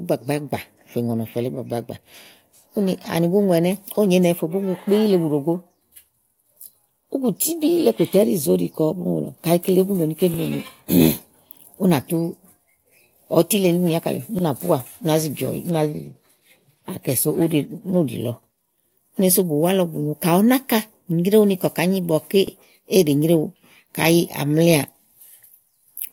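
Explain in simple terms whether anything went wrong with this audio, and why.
Overlapping chunks caused this: the speech was handled in 4-second pieces that overlap, so a 44 ms sliver plays twice at each join. You'll hear a quick stutter or click at 14.39–14.43, 18.43–18.47 and 22.47–22.52 seconds.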